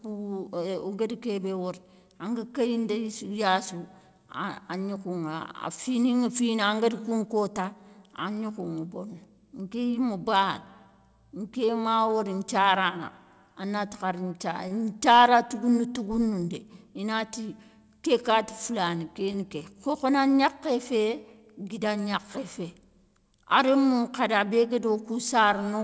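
At 14.68–14.73 s and again at 19.32–19.36 s, a short stall from a late packet: the jitter buffer ran dry, so the receiver stretched the last sound by about 27 ms and 20 ms, then resumed. Nothing is lost, but the sound briefly holds with a faint buzz or dip. The band stops at 8 kHz, consistent with G.722 on the call path.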